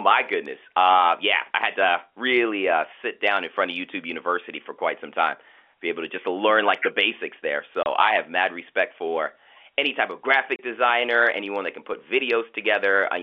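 Two short dropouts in this speech cut right through the audio, classic packet loss filled with silence. The first hits at 7.83 s, just after "like the basics there" and before "I have mad respect". The second comes at 10.56 s, between "for any type of" and "designer anyone that can". Each hole runs 30 ms, which fits a single lost packet, and the receiver just played nothing there. The G.711 coding keeps the speech within the narrow telephone band.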